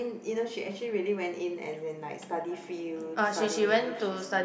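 Feedback echo between two devices runs from 2.4 s to the end of this speech clip. Each word returns roughly every fifth of a second, peaking about 12 dB below the speech, because a second nearby device replays it into a microphone whose echo canceller cannot remove another device's playback. The call's microphone processing limits the sound to 8 kHz.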